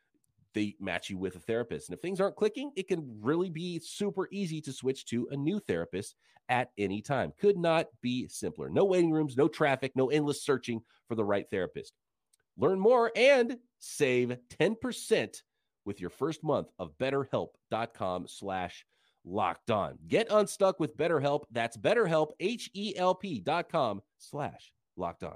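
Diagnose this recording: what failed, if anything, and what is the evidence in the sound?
Nothing failed; no stage leaves any audible trace.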